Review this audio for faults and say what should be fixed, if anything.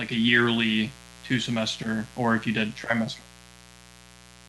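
There's a mains buzz running under the speech from start to finish, a steady, raspy hum sitting roughly 25 dB below the talker. It's built on 60 Hz, with sharp switching spikes twice per cycle stacking harmonics up into the low kilohertz. To keep it out, track down the dimmer, rectifier or unshielded run feeding the mic line and separate or shield it.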